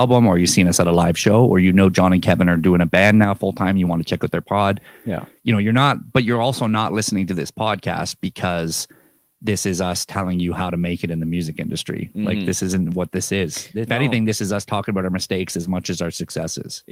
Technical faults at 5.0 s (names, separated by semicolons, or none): none